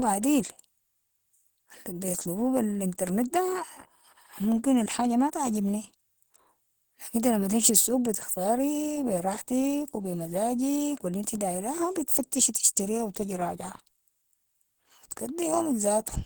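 Throughout the speech, likely Opus compression at a low rate, around 16 kbps, in hybrid mode leaves plainly audible damage: muffled, hoarse tone, though content still reaches about 20.1 kHz.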